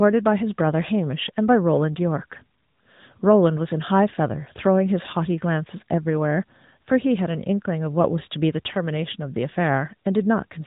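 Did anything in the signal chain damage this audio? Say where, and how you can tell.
Yes. The damage comes from the codec stage: the speech has passed through an AMR narrowband mobile codec from start to finish. Nothing above about 3.8 kHz survives, so the sound is boxed-in and telephone-like, with a plainly audible buzzy, synthetic edge. That edge fits a mid-rate mode near 10.2 kbps, where the vocal-tract model and sparse pulse excitation rebuild the voice rather than preserve it. On a spectrogram the energy stops at a hard ceiling near 3.8 kHz for the whole clip, with smeared, grainy harmonics below it.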